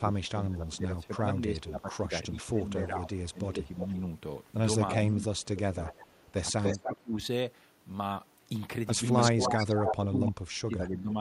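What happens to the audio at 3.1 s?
At 3.1 s a faint delayed copy of the speech creeps in, about 10 dB down and trailing by 344 ms, running to 3.9 s. That's an echo leak, likely a speakerphone's echo canceller letting residual pickup through. Underneath, the speech has been ducking by up to about 15 dB since 0.0 s, through 3.98 s, which points to speech suppressed in double talk, with the canceller turning down its own talker along with the loudspeaker echo while the two sides overlap.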